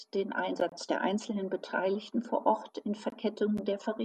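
Gaps at a join of encoded pieces occur at 0.69–0.72 s, just before "der einzelnen", and 3.10–3.12 s. Separately encoded segments were joined untrimmed, leaving encoder delay and padding as abrupt, edge-smeared 25 ms and 21 ms silences in the speech.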